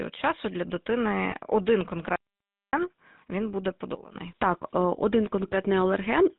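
A buzzy, gravelly roughness sits on the speech from start to finish, with nothing audible above 4 kHz. That is the sound of the GSM full-rate codec, which fits a 13 kbps stream: it models the vocal tract and excites it with sparse, regularly spaced pulses, discarding much of the fine detail.

From 1.30 to 1.35 s the sound briefly freezes into a short metallic ring. These are lost GSM frames. The decoder, finding a bad frame, repeated the parameters of the last good one, and the roughly 20 ms of missing audio fits a single lost frame.

At 2.16 s the speech cuts off abruptly into dead silence, with no room tone, and returns mid-flow at 2.73 s. This is an audio dropout to silence lasting about 0.58 s. The likely cause is a momentary loss of the input, such as a failed link or a brief mute, while the recorder kept writing silence.

At 3.95 s the level of the speech and the background noise drops together by about 14 dB in an instant, and it stays down until 4.16 s. 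This sudden gain jump was likely a digital gain change applied between one sample and the next, with no ramp to smooth it.

From 5.48 to 5.54 s the metallic, held ring returns and lasts a little longer than before. This is another case of lost GSM frames, this time about 40 ms of concealment, which fits two consecutive frames rebuilt from the last good one.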